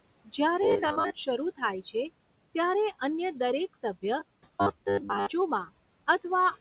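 From 0.62 to 1.10 s and again from 4.19 to 5.26 s the speech turns into robotic sound from repeated short buffers, a rigid metallic buzz at 100 Hz. That pitch fits 10 ms chunks being replayed, likely because audio arrived too seldom. About half the first stretch and most of the second is repetition. A fixed drone that follows the speaker only roughly sets it apart from ordinary codec roughness, which here is the G.711 narrowband sound with nothing above 4 kHz.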